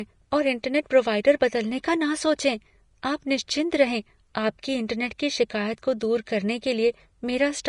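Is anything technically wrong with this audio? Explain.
Yes, there's a codec problem running through the whole speech clip. Nothing comes through above 10.6 kHz, and the damage is plainly audible: the treble has a hissy, grainy texture, tones sound roughened and attacks are smeared. That's likely Vorbis compression at a low setting, consistent with something around 35 kbps. At that rate the encoder pulls its cut-off down and quantises the upper band so coarsely that the fine detail there turns into noise of roughly the same energy.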